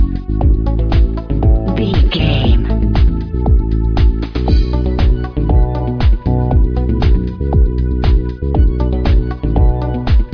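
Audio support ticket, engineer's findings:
No audible faults found anywhere in the clip, so nothing to flag on this ticket.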